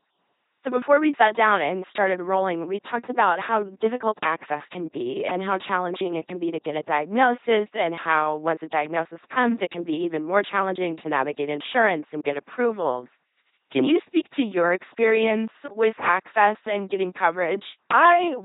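From start to finish, the speech passes through an LPC-10 vocoder, and the damage is heavy. Each moment is rebuilt as either a buzzing pulse train or pure noise fed through a simple vocal tract filter. The result is a mechanical robot voice. Where the voiced or unvoiced choice goes wrong, buzz replaces hiss or hiss replaces buzz. Nothing is heard above 3.9 kHz. The coarseness fits a 2.4 kbit/s stream.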